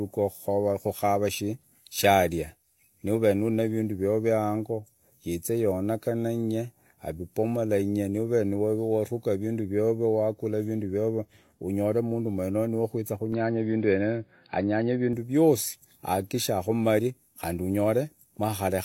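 Speech, turning dull from 13.32 to 15.13 s, cut above 4.9 kHz with a level jump of about 5 dB and new faint hiss. This is likely an input switched to a poorer device, not a mere filter.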